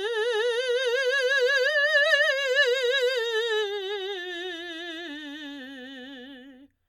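Nothing faulty is audible anywhere in this music.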